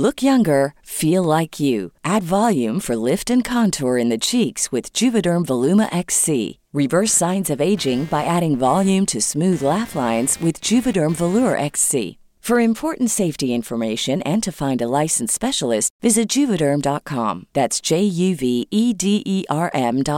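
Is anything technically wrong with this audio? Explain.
Yes. From 7.05 to 11.75 s there is computer activity noise: load changes in the computer disturb the ground shared with the audio circuit, adding a buzzing, chirping texture that pulses at around 200 per second, sitting well below the speech and unrelated to it.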